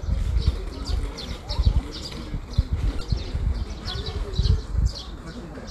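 At 0.87 s the sound jumps, skipping ahead by about ten milliseconds with no gap of silence. This is most likely a dropped buffer (overrun): the software failed to read its samples before the audio hardware overwrote them, so that slice is simply missing and the audio on either side is butted together.

From 2.98 s to 3.01 s there is a brief disturbance, characteristic of damaged data in a compressed stream. Corrupt bytes in that stretch left the decoder misreading its frames and losing sync until it found the next valid frame header. The 30 ms of garbled output is heard as that short disturbance.

At 4.95 s the same kind of small forward jump recurs, again about ten milliseconds lost. It has the signature of a likely second dropped buffer, the missing samples spliced over without any silence.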